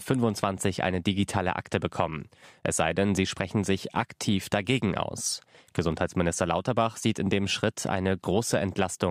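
A speech recording with nothing technically wrong with it.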